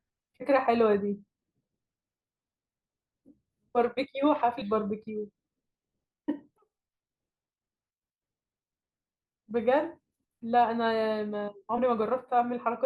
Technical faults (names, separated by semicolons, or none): compressed frames skipped